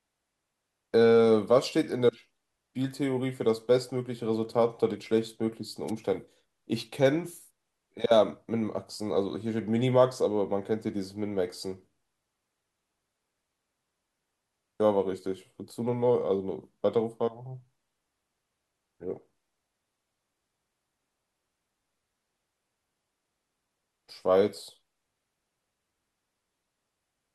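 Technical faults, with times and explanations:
5.87–5.91 s, wireless microphone noise hit: a brief burst of static where the FM radio link faded as reflections cancelled, letting receiver noise rise.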